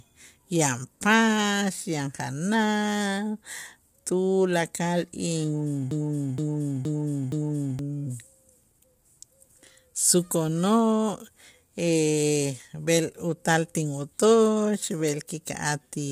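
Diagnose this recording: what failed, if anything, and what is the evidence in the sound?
The codec stage is at fault throughout. The speech sounds rough and grainy, with noise filling the gaps between pitch harmonics. Nothing is present above 15.6 kHz. This is likely low-delay AAC compression, AAC-ELD, starved of bits. The damage fits about 32 kbps.

Playback or streaming failed from 5.91 to 7.79 s. A 470 ms fragment repeats exactly, back to back, four times. This is a broken-record loop. The likely cause is a stall that kept resending the last held fragment. The audio due in that span is lost.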